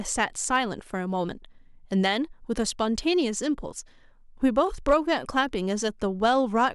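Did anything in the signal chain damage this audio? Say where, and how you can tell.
Yes. Hard clipping appears from 0.21 to 0.57 s and again from 4.58 to 5.40 s, with the speech overdriving the level limit by about 1 dB and then about 2 dB. The likely stage is the converter or a sample-format conversion: the loudest peaks exceed full scale and are sliced flat. Those squared tops create high harmonics, heard as brief crackle riding the peaks, slightly more pronounced in the later, hotter stretch.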